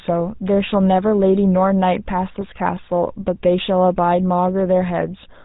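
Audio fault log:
throughout: GSM full-rate codec. Plainly audible buzzy, gravelly roughness with nothing above 4 kHz, from pulse-driven vocal-tract modelling. It fits 13 kbps full-rate coding.
2.41 to 2.45 s: GSM bit errors. A brief squawky, gargled burst where corrupted filter, pitch or gain values, about two frames' worth, scrambled the decoded speech.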